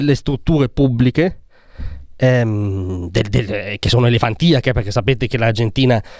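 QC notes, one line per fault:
No faults heard.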